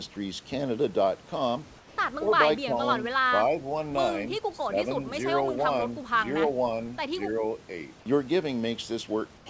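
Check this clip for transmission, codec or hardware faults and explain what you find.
Two kinds of fault are audible in this speech. The band stops at 8 kHz, which fits a G.722 wideband call codec.

Comfort noise in place of the background appears at 1.78 to 1.98 s and at 9.38 to 9.46 s. The sender likely stopped transmitting in the pause. The receiver filled the gap with synthetic noise. The real background gives way to a smoother noise, about 4 dB and about 2 dB quieter.

Speech is suppressed in double talk at 2.25 to 2.78 s, 3.22 to 3.73 s, 4.27 to 5.13 s and 7.27 to 7.43 s. Both sides likely talked at once, so the echo canceller turned everything down. The voice dips by around 10 dB, up to roughly 15 dB at 4.27 s, and about 5 dB at 7.27 s.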